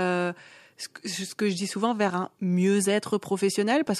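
No technical faults are audible.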